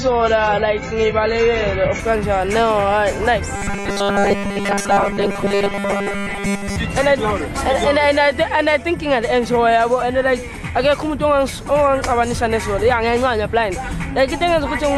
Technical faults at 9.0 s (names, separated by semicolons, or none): none